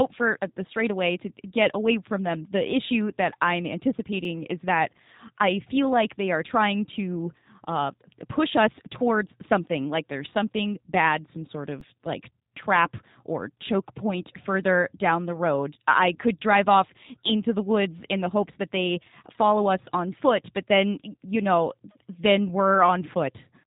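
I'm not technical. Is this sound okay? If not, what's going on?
No. The whole recording passes through the G.729 codec, a phone-call compressor that rebuilds the voice, so it sounds rough and slightly synthetic rather than merely muffled, with nothing above 3.8 kHz. At 4.25 s and 11.8 s there is an underrun with held sample: playback briefly freezes at its last level instead of dropping to silence, and a few milliseconds of sound are skipped.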